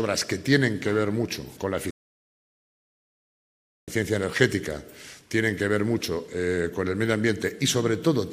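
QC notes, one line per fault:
1.91 to 3.88 s, rebuffering stall: playback ran out of data, adding 1.97 s of silence before resuming exactly where it stopped; unlike a dropout, nothing is missing.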